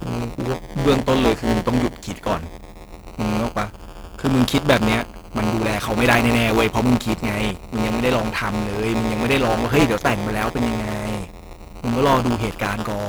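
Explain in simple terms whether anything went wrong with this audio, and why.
Something did go wrong: the speech carries buffer tearing from start to finish. The playback software and the sound hardware have drifted out of step, so within each small chunk of audio, about a tenth is stale sound from roughly 10 ms earlier, joined on abruptly. Those joins repeat 172 times a second, which fits a 256-sample buffer, and they come across as a steady robotic buzz riding on the voice, present only while sound is playing.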